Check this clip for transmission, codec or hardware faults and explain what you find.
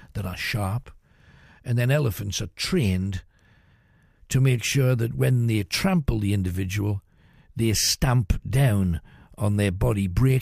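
No faults found.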